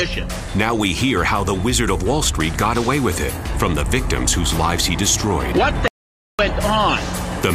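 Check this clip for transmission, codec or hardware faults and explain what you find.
One hardware or link fault is present. From 5.88 to 6.39 s there is an audio dropout to silence: about 0.51 s vanishes into silence, likely from a lost input, with no room tone, unlike a quiet pause or gated noise floor.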